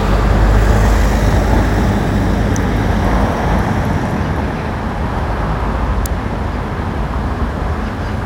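A nearby switch, motor or static discharge is likely arcing briefly, and the audio line picks up each burst as an electrical switching spike riding on top of the sound. It happens twice: at 2.56 s a single sharp snap peaks at around -5 dBFS, and at 6.06 s a second, even harder snap reaches close to full scale. Each is a tight, instantaneous crack added on top of the sound.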